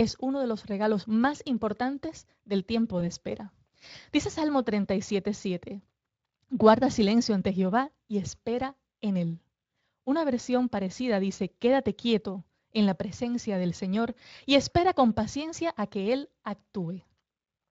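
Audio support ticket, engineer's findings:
VoIP packet loss concealed by the speech codec, 2.99–3.08 s, after "más importantes del tiempo": brief buzzy or noisy smear. Likely one lost 20 ms Speex frame; decoder extrapolated last pitch and filter at falling gain. Spectrogram: frozen, fading harmonics. Waveform: short level sag, slow recovery.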